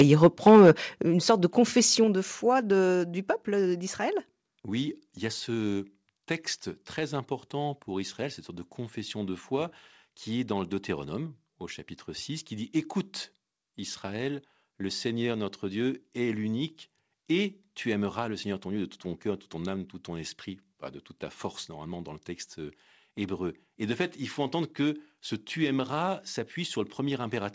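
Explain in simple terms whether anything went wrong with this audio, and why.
The opening is too loud. From 0 to 0.71 s, just before "une sorte de", the loudest moments sound harsh and crackly. That is microphone overload, likely from the input being set too high.

Then the level drops suddenly three times, at 0.02 s, 1.02 s and 2.04 s. The last one falls between "une sorte de" and "de foi". This is the microphone volume stepped down, likely by the call software reacting to the overload.

The call connection itself carries the sound with nothing above 8 kHz.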